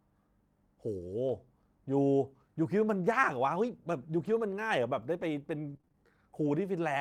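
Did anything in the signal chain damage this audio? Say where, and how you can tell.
Yes, at the network stage. At 3.03 to 3.09 s and 4.19 to 4.33 s, 40 ms and 80 ms of sound turn rough and noisy, with no gap. This is lost packets rebuilt from error correction: the following packets carried low-bitrate copies, which the decoder played instead of silence.

From 5.69 to 5.96 s there is repeated packet loss with a robotic sound: choppy audio with several short holes, the longest 22 ms. About 102 ms was patched by extending the previous sound, covering about 39 percent of the span. Unlike the error-corrected spots, pieces are actually missing and the patches repeat in quick succession.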